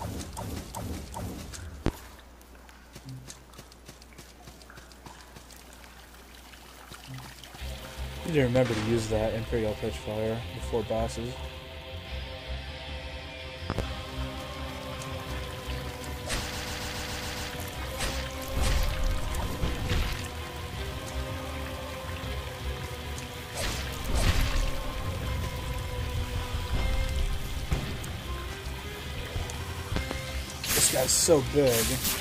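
The audio has loud pops at 1.86 s and 8.56 s, then as double pops from 13.70 to 13.82 s and 29.96 to 30.15 s. They sit about 15 to 20 dB above the sound. Each is a sharp thump over audio that carries on underneath, likely from a voltage pulse such as a plug, switch or static discharge. Repeated frames cause stutters at 13.03 to 13.21 s and 29.65 to 29.84 s, where a 93 ms stretch plays twice more. From 16.51 to 17.49 s a 139 ms stretch repeats seven times and adds nearly a second.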